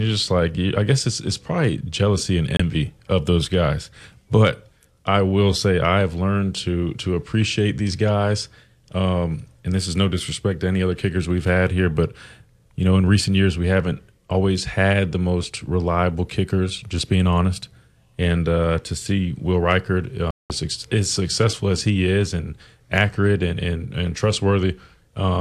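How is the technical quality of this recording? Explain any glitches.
Two digital broadcast dropouts break up the speech. In each, the receiver stopped getting frames that passed their error check and muted its output until valid data resumed. At 2.57 to 2.60 s the gap is brief, consistent with a single lost frame of about 24 ms, and sounds like a tiny hole. At 20.31 to 20.50 s a longer run fails, about 192 ms, which fits eight consecutive frames. That one is a silent cut in which the speech is lost.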